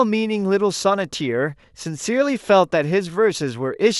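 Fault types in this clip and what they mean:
Nothing to flag here: the speech comes through with no audible dropouts, glitches or other technical faults anywhere in it.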